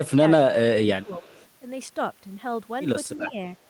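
From 0.07 to 0.25 s the speech dips sharply, by roughly 20 dB at its deepest, across about 150 ms in total. This is speech suppressed in double talk. The likely cause is an echo canceller that heard both sides at once and turned everything down. On a waveform the envelope pinches in. On a spectrogram the upper harmonics thin out or vanish in patches. The same happens more broadly from 0.75 to 1.38 s, about 400 ms affected and again roughly 20 dB deep.

Overlapping that, from 1.02 to 1.46 s, is a faint echo leak: a copy of the speech arriving 323 ms late and about 35 dB below it. This is likely the far end's loudspeaker sound getting past its canceller and being sent back. It is a ghostly trace, visible on a spectrogram as weak harmonic lines shifted about a third of a second after their originals.

A milder suppression comes from 3.27 to 3.40 s, with a dip of only about 10 dB. The level sags briefly rather than dropping out, showing as a shallow notch in the waveform envelope.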